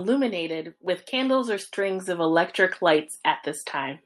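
From 0.46 to 3.11 s, automatic gain rising: the gain control judged the input too quiet and lifted it about 9 dB, swelling voice and background together.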